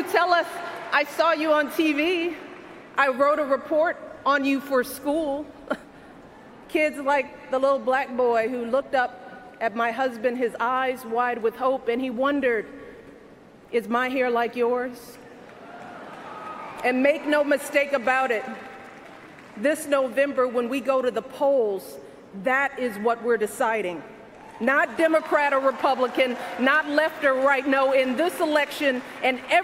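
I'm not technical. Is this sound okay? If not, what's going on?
Yes, this sound is okay, and nothing is going on that needs fixing.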